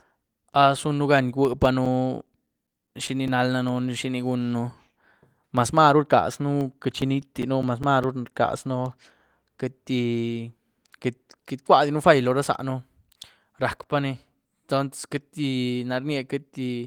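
From 1.45 to 3.69 s and again from 6.61 to 8.44 s, CD scratch ticks recur about five times a second, each under about 10 ms. Once per disc turn, a blemish exceeds error correction and the player patches or mutes samples, leaving thin vertical spectrogram lines and waveform notches.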